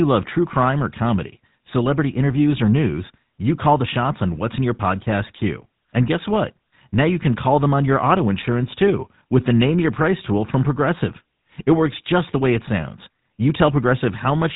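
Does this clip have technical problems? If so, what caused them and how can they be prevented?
Yes. The speech passes through the GSM full-rate codec for the whole clip. Nothing survives above 3.8 kHz. The coder rebuilds the voice from a vocal-tract model fed by sparse, regularly spaced pulses. This leaves a plainly audible buzzy, gravelly roughness, consistent with a 13 kbps full-rate coder. To prevent it, capture or transmit over a wideband codec instead of a legacy GSM path.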